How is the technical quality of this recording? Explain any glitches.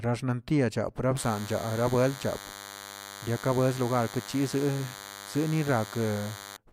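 The recording has one fault: a DECT cordless phone buzz from 1.17 s to 6.57 s. A nearby DECT unit transmits a radio burst every 10 ms, which the audio circuitry rectifies into a thin, steady 100 Hz buzz about 15 dB below the speech. A spectrogram shows evenly spaced horizontal lines at 100 Hz and its harmonics, and the waveform carries a regular train of spikes every 10 ms.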